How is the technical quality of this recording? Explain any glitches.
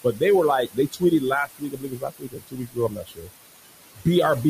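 The recording is marred by an overly aggressive noise suppressor. It leaves audible processing residue in the background and also cuts into the speech itself.

Noise suppressor artifacts are present throughout. The room noise, which sits about 13 dB below the speech, is pushed down by about 19 dB frame by frame, so it sinks between the words and rises under them. On a spectrogram the noise floor looks blotchy and speckled rather than smooth.

Speech cut by the noise suppressor occurs at 0.04–0.22 s, 0.66–1.23 s, 1.46–3.3 s and 3.95–4.06 s. The suppressor mistakes parts of the speech for noise and drops them by about 13 to 21 dB, most extensively across roughly one and a half seconds of the long middle stretch. Those parts sound swallowed or faint. The waveform shows sudden notches in the envelope, and the spectrogram shows gaps in the speech energy.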